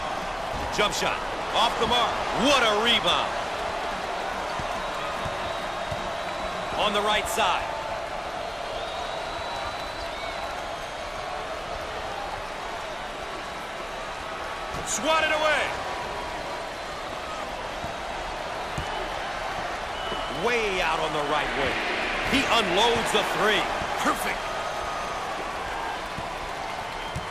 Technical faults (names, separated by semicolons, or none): none